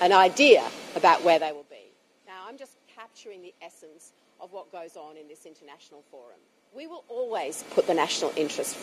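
From 7.02 to 7.78 s there's zipper noise: the level changes around 25 dB in 1 dB jumps with no smoothing, roughly thirty steps a second, so each jump leaves a tiny click and you hear a fast ticking riding on the sound.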